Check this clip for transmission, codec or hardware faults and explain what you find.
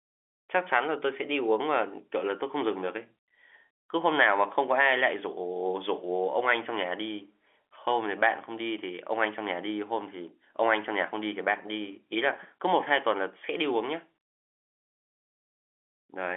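I find no transmission, codec or hardware faults in this clip.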